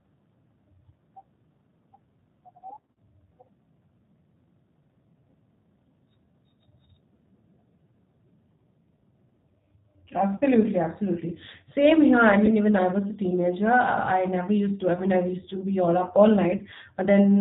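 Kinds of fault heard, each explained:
G.729 codec, throughout: the speech is rebuilt from a vocal tract filter, a pitch predictor and a few pulses per short frame, which fits an 8 kbit/s G.729A stream. Nothing above 4 kHz survives, so the voice sounds plainly rough and synthetic.
VoIP packet loss concealed by the speech codec, at 2.81–2.97, 10.37–10.43, 12.46–12.53 (between "here I" and "even I was a"), 14.95–15.01 and 16.58–16.63 s: the decoder stretches the last frame into a fading buzzy tone or coloured noise, worst at 2.81 s, where 120 ms is lost across 160 ms.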